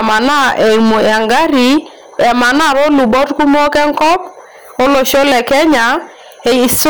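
Speech, hard clipped throughout: driven about 13 dB past full scale, nearly a third of samples are flattened, giving harsh fuzz on every loud syllable rather than gentle saturation.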